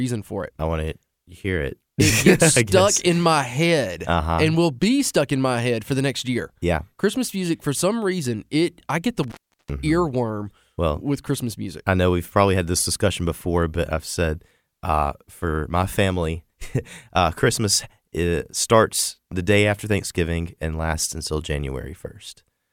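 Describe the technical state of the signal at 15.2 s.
At 15.2 s the speech signal is intact, with no audible fault at that moment.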